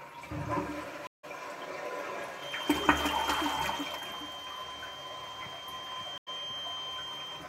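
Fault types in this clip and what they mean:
stream reconnect: Brief silences at 1.07 s and 6.18 s, after which the sound resumes slightly further on, as the player lost its connection and restarted decoding mid-stream.
feedback whistle: A thin 3.2 kHz tone, swelling and fading slowly, about 5 dB below the sound from 2.32 s onward, likely from a loudspeaker-to-microphone loop hovering near feedback.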